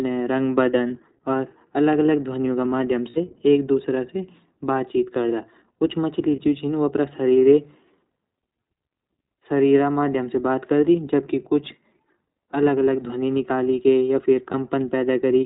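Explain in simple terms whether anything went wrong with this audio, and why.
Yes, two things. The whole recording passed through the iLBC codec, an internet-call voice codec that cuts everything above 4 kHz, so the speech sounds muffled, a bit rough and slightly synthetic throughout.

There are also lost iLBC frames. At 0.88 s and 6.36 s (after "बातचीत करदा कुछ मछली"), and again at 14.52 s, a 20 ms chunk went missing. At 3.10 to 3.18 s, between "अलग ध्वनियों क माध्यम" and "एक दूसरा से बातचीत", about 60 ms went missing. Each time the decoder filled in the gap by repeating the last bit of voice with some noise, so you hear a brief buzzy, held sound before the speech snaps back.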